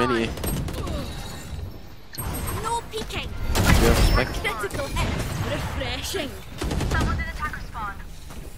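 Nothing in this audio is technically wrong.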